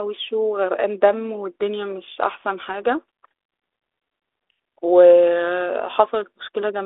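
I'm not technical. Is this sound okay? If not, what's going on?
No. At 2.67 to 2.76 s there's a short pop and rough crackle, with the level briefly jumping. These are bit errors on an ADPCM link: a few flipped bits on this phone-style connection knock the decoder off track until it recovers.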